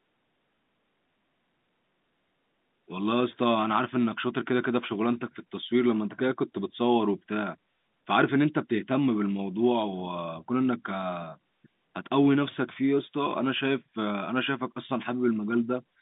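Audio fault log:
Audio fault log: none, the speech coming over an ordinary G.711 A-law telephone line that carries 150 Hz to 3.7 kHz.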